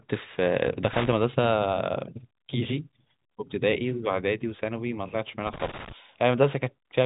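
A worn or dirty contact somewhere in the chain makes and breaks as it shifts, chopping the speech signal and adding pops wherever DC sits on the line. This loose connector crackle appears from 0.93 to 1.12 s and again, longer, from 5.47 to 5.92 s, each time as an irregular burst of scratchy crackle over the speech, which otherwise arrives through G.711 telephone coding with nothing above 3.8 kHz.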